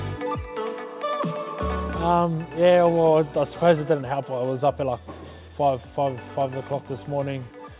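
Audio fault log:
Nothing stood out on listening, and the sound carries nothing above 4 kHz, which is what a G.711 A-law call path at 64 kbps normally delivers.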